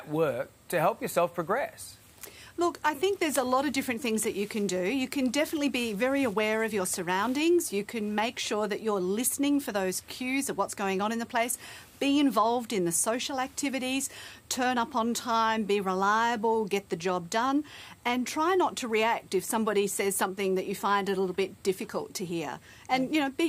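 No technical faults are audible.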